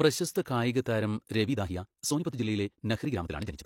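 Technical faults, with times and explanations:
0.45 s and 0.83 to 0.86 s, pre-echo: a brief hiss comes just before two sharp onsets in the speech, the first lasting about 13 ms and the second about 32 ms, and each attack sounds softened and smeared. A transform codec spreads its quantisation noise across the whole block, so when an onset sits late in a block, noise sized for the loud part also fills the quiet moment before it.
1.42 to 3.65 s, time-stretched section: from this point to the end, the speech suddenly runs about 1.72 times faster while its pitch stays where it was, so the delivery sounds rushed. This is likely the result of software compressing the passage to fit a length, keeping pitch steady by dropping short pieces of the audio.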